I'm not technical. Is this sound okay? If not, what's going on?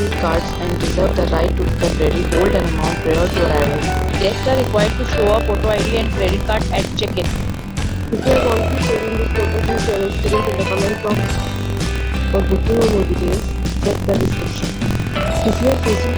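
No. Buffer tearing runs throughout: a robotic rattle about 43 times a second, fitting a 1024-sample buffer. Unlike mains hum, it vanishes whenever the sound stops.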